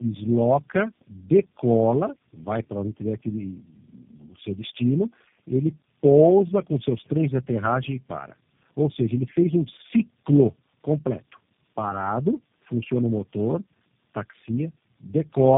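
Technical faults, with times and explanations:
Throughout, tandem speech coding: the speech sounds rough, muffled and warbly, pointing to four speech codecs in a row, the last fitting G.729A, each re-coding the previous one's damage. A spectrogram shows nothing above 3.7 kHz, with smeared, blotchy harmonics.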